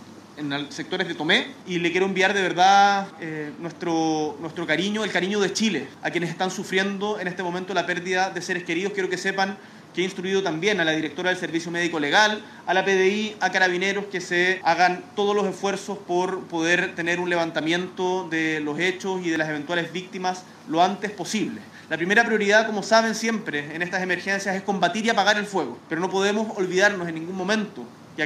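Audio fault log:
No faults detected.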